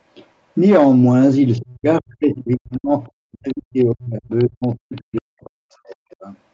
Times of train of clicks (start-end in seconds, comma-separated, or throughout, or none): none